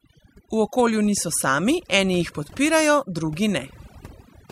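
Throughout the clip, overdone noise removal is at work: the reduction was set so aggressively that frequency bands near the estimated noise floor are cut almost entirely, taking quieter speech detail with them. Gaps fall to near silence with twinkling, warbling artefacts.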